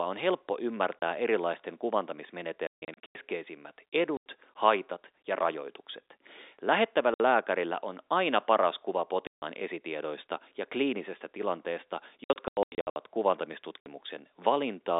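Packet loss filled with silence cuts hard-edged holes into the speech at 0.99 s just after "on helppo", 2.67–3.15 s (scattered gaps, longest 150 ms), 4.17–4.23 s before "haitat ja rajoitukset", 7.14–7.20 s, 9.27–9.42 s, 12.24–12.96 s after "esitiedoista ja kliinisestä tilanteesta" (scattered, longest 90 ms), and 13.81–13.86 s. Every gap is a multiple of 30 ms, which fits 30 ms packets. That fixed length and the abrupt edges set it apart from a fading signal dropout. The G.711 narrowband telephone band carries through unchanged under the holes.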